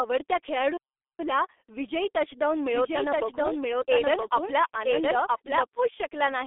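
G.723.1 codec damage runs through the whole speech clip: nothing reaches above 3.8 kHz, the band sits between roughly 300 Hz and 3.6 kHz, and the heavy, hoarse, muffled texture with smeared consonants fits a low-rate stream near 6 kbit/s built on coarse 30 ms frames. A doubled audio track appears from 2.64 to 5.64 s, just after "विजयी टचडाउन". A full-band second copy trails about a second behind at about the same level, starting and stopping abruptly with no decay or room colour, likely from a second, slower capture path feeding the same mix.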